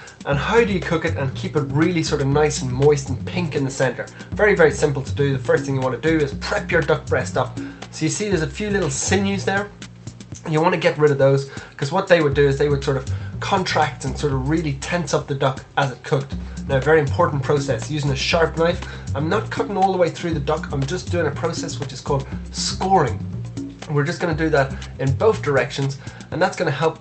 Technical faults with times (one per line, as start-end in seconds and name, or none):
none